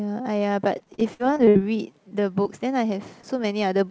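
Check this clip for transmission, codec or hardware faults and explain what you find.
Several packet-delivery faults disrupt this speech between 0.78 and 3.25 s. The sound is also band-limited with nothing above 8 kHz, which fits a G.722 call codec.

From 0.78 to 1.57 s, repeated packet loss left nine gaps, the longest 62 ms, patched by extending prior sound. About a third is concealed, so it sounds choppy with pieces missing.

From 1.24 to 2.22 s, a jitter buffer slow-down repeated pitch periods to rebuild reserve. This added 70 ms, so the speech runs at 94% speed, drawn out but unchanged in pitch.

From 2.09 to 2.13 s, a short stall from a late packet emptied the buffer. The receiver held the last sound for 21 ms, a brief overhang with nothing lost.

At 2.43 to 2.47 s and 3.21 to 3.25 s, short concealed packet loss replaced about 20 ms each time with extrapolated sound, leaving brief smears or wobbles.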